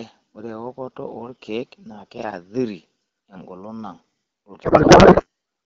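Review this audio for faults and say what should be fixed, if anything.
From 4.63 s to 5.26 s the speech collapses into garbled noise and warble that barely follows it. This is a codec payload misread: the decoder takes well-formed AMR-WB frames but looks for the fields in the wrong bit positions. The sound suggests octet-aligned packing being read as bandwidth-efficient. Unlike packet-loss concealment, which smears or repeats the last good sound, this garble is new and unrelated to the speech. Unlike low-bitrate raspiness, it starts and stops abruptly. To prevent it, make both ends agree on the AMR payload format during session negotiation, for example by setting the octet-align parameter explicitly.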